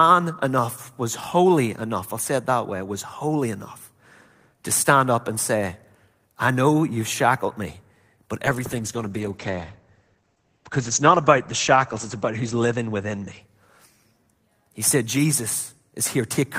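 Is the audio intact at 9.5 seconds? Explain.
No. At 9.5 s the audio is inside a call bitrate drop running from 8.47 s to 14.35 s, starting just after "you've shackled me but". The bandwidth estimate fell and the encoder was limited to far fewer bits, which fits a fall from about 32 kbps to about 11 kbps. The speech is coded more coarsely, and the upper range is cut above 8 kHz, so it sounds muffled and degraded.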